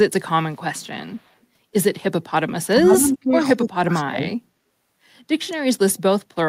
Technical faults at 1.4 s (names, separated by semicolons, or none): echo leak